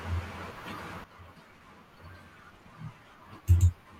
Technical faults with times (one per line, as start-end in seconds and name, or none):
1.04-4.00 sudden gain jump